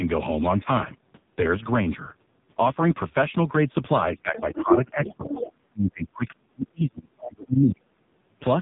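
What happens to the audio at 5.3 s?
Speech suppressed in double talk runs from 4.12 to 5.45 s, so 5.3 s falls inside it. The talker's level sinks by up to about 10 dB, dipping for roughly a second in total, likely because an echo canceller heard two talkers at once and turned everything down.

Other side's voice leaking through overlaps it from 5.04 to 5.52 s. A second voice sits faintly underneath, about 10 dB below the talker. This is likely loudspeaker sound reaching the microphone and surviving incomplete echo cancellation.

The AMR narrowband mobile codec colours this moment as it does the whole clip. Nothing above 3.8 kHz passes, and heavy coding damage makes the voice buzzy and synthetic. That degree of damage fits a very low bitrate of around 5 kbps, where few pulses drive the vocal-tract model.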